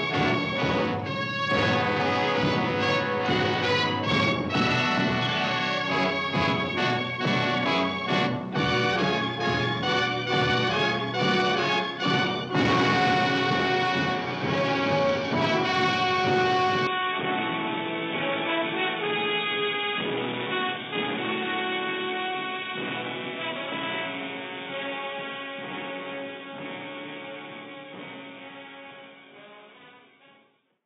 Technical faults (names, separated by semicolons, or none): input switched to a poorer device